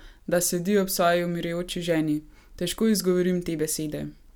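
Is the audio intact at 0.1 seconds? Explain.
Yes, at 0.1 s the audio is intact, with no fault to be heard at that moment.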